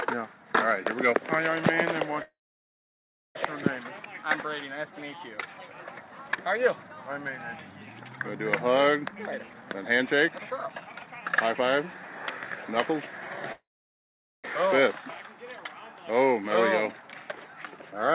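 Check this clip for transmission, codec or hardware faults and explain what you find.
Two kinds of transmission fault are present: two call audio freezes and one jitter buffer speed-up. The G.711 mu-law path itself shows only its normal 4 kHz band limit.

Call audio freeze, 2.22 to 3.37 s and 13.52 to 14.46 s: the sound stops and a short fading tail of the last sound gives way to silence, about 1.01 s in the first event and 0.81 s in the second. The likely cause is delayed packets draining the jitter buffer, with the receiver concealing the gap until data resumed. Playback then continues exactly where it stopped, so nothing is lost but 1.13 s and 0.92 s of delay are inserted.

Jitter buffer speed-up, 9.08 to 13.10 s: playback runs at 127 % speed with pitch unchanged, so the sound seems hurried. The receiver's buffer had grown beyond its target, so it repeatedly cut out short pitch-period-length segments to catch up, trimming roughly a second of audio in total.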